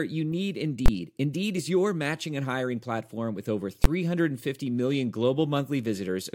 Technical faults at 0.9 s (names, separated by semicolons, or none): invalid numbers at full scale